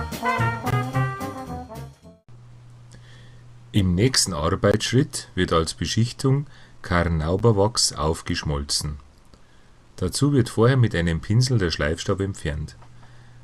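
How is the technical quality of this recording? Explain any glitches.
The recording has two kinds of glitch: three brief cut-outs and one stretch of reduced streaming quality.

A block of digital silence occurs at 0.70–0.73 s, 4.72–4.74 s and 7.39 s. Each time the output buffer was most likely not filled in time, so zeros played instead. The first two are about 21 ms long, which fits a 1024-sample buffer, and sound like short holes. The 7.39 s gap, about 11 ms, fits a 512-sample buffer and is heard as a tick or dip. The sound stops and returns abruptly, with no fade.

An adaptive stream at a lower bitrate runs from 2.53 to 4.53 s. The stream briefly fell back to a cheaper version, which points to a drop from roughly 64 to 32 kbit/s Opus. Codec artefacts rise suddenly across those two seconds. Unlike the silences, nothing cuts out, because the audio continues without any gap.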